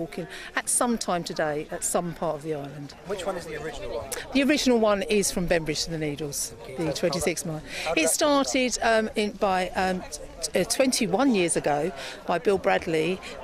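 No technical faults can be heard anywhere in this audio. Nothing in it points to a problem in how it was captured, processed or delivered.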